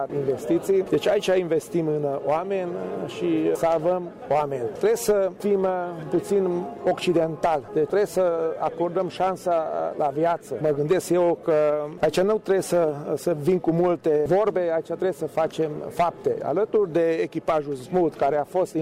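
No technical faults can be heard anywhere in the audio.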